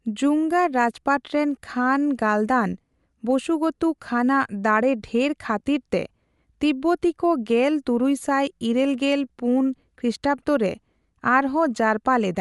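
Speech, with a codec fault running the whole way through. Nothing reaches above about 11.5 kHz. The upper band has a breathy, grainy edge that stays plainly audible. The cause is likely Bluetooth LC3 compression. That transform codec works in short frames and thins out the upper spectrum, filling gaps with noise. The texture fits 10 ms frames at a moderate rate near 48 kbps.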